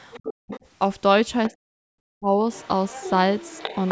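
From 0.13 to 0.6 s there's the other side's voice leaking through, sitting about 15 dB under the speech, most likely echo the canceller didn't fully remove from the loudspeaker. Inside that, from 0.3 to 0.52 s, the speech likely gets suppressed in double talk: the talker dips by as much as about 40 dB for roughly 200 ms while both sides overlap. A short scrap of leakage returns at 1.45 to 1.52 s, around 20 dB down, and then from 1.5 to 2.46 s the same likely double-talk suppression pulls the talker down for around 700 ms. From 2.53 s to the end the leaking voice comes back louder, only about 10 dB below the speech.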